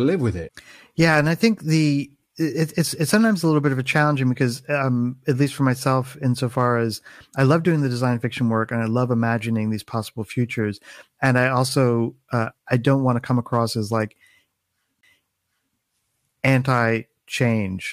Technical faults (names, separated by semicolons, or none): CD skip